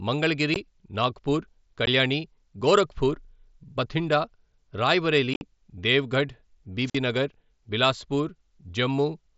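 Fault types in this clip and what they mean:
Unconcealed Bluetooth headset packet loss: Short blocks of audio between headset and phone never arrive, and silence fills the gap with no attempt to smooth it over. Brief holes of about 15 ms with hard, abrupt edges fall at 0.54 and 1.86 s, and a rougher, chopped stretch from 5.34 to 5.41 s loses about 68 ms, with its longest run near 53 ms. Unlike a squelch dropout, no hiss builds up beforehand.
Wireless microphone squelch dropout: The analogue radio signal from the microphone weakens until the receiver's squelch shuts the output off, rather than data going missing on a digital link. Between 6.85 and 6.97 s, static swells first, then a mute of about 49 ms follows, and the sound comes back. That rising hiss before the hole sets it apart from the abrupt, clean-edged gaps of the Bluetooth losses.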